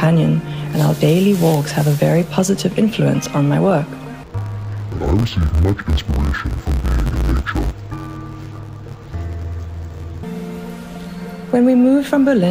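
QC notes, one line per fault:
4.23–10.23 s: interleaved audio read as planar. Each 10.9 ms block splits into half-speed halves. The sound goes dull and robotic, with a 92 Hz buzz.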